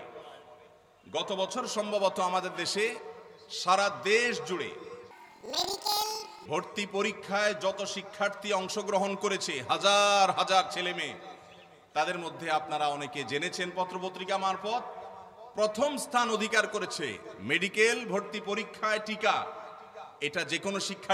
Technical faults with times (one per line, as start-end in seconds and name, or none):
5.11-6.47 planar audio read as interleaved